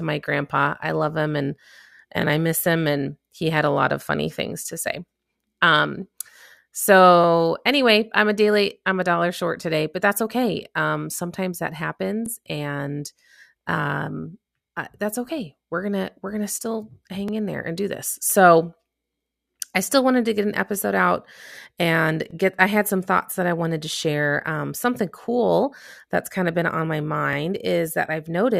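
Overlapping chunks cause a brief stutter at 2.22–2.24, 7.24–7.26, 12.26–12.28, 17.28–17.31 (after "we're going to still"), 22.31–22.33 (after "an episode out and") and 27.33–27.35 s. Each 5-second chunk starts 23 ms before the previous one ended, so that slice plays twice. Unlike a dropout, no sound goes missing, and the strict 5-second spacing sets it apart from random glitches.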